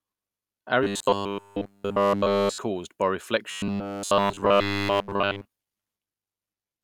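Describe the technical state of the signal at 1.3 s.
At 1.3 s the speech is a rigid, metallic buzz fixed at 100 Hz, roughly following the words, from 0.83 to 2.58 s: robotic sound from repeated short buffers. The likely cause is nearly all audio there being replaced by one 10 ms buffer replayed over and over.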